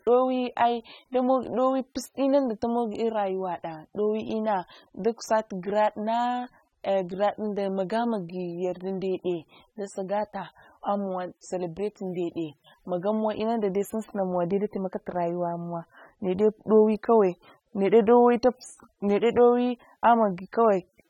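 From start to finish, the speech carries plainly audible coding damage, likely from AAC compression. Nothing is present above 18 kHz, and sibilants take on a smeared, fizzy, warbling texture where coarsely quantised bands lose detail, which fits AAC-LC at a low bitrate near 27 kbps.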